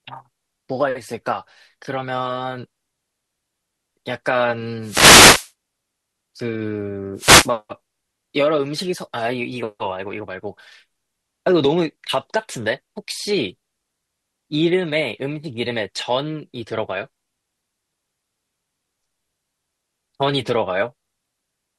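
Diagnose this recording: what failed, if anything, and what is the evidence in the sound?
What failed is the wireless microphone link, on the analogue side before anything gets digitised. There are two wireless microphone noise hits in the speech: a swish of static from 4.82 to 5.52 s, about 0.7 s long, and a shorter one from 7.15 to 7.51 s. That's the FM radio signal dipping as reflections cancel each other. The receiver's noise floor climbs into the gap as a brief burst of hiss.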